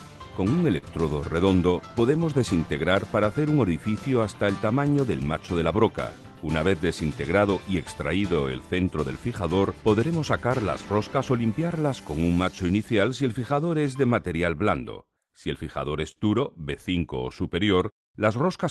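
Clock drift between sender and receiver runs through the whole clip. The sender's clock is about 4 percent slow, so the receiver's jitter buffer keeps draining. On a waveform the sound envelopes look slightly spread out in time, and there is no single visible edit point.

Repeated timing corrections run from 0.04 s to 18.45 s. The receiver repeatedly lengthens short pieces, playing at 96 percent speed and adding roughly 0.7 s overall. The result is a faintly dragging, uneven tempo. A spectrogram shows small stretched patches, unevenly spaced, where harmonics hold briefly.

A short stall from a late packet comes at 0.78 to 0.84 s. A packet arrived 43 ms late, so the buffer emptied and the last sound was held for 43 ms. Nothing is lost, but that moment lingers with a slight buzz or dip. A spectrogram shows a flat, smeared band there.

Scattered short gaps appear between 13.88 s and 18.63 s, about five of them. 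Each small hole was patched by extending the preceding sound, about 70 ms in total, and the longest is around 40 ms. They sound like brief ticks or smears. On a waveform they show as tiny repeated or flattened cycles. The Opus call path limits content to 12 kHz, which fits a bitrate near 20 kbps, and the spectrogram shows a clean ceiling there.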